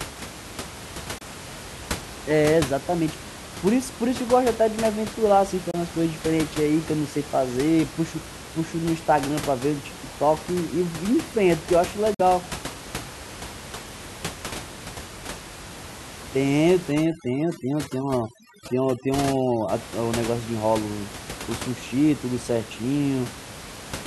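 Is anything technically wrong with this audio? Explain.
Yes. There are two kinds of fault in this speech clip.

Short gaps at 1.18 to 1.22 s, 5.71 to 5.75 s and 12.14 to 12.20 s are likely a Bluetooth dropout. Packets arrived late and were discarded. The output went silent. Speech then resumed further along, as if it had kept playing.

From 16.92 to 19.69 s there is overdone noise removal. The room noise, about 13 dB below the speech, was suppressed too hard. Frequency bands near the noise level were cut away. The background drops and breaks up into twinkling specks.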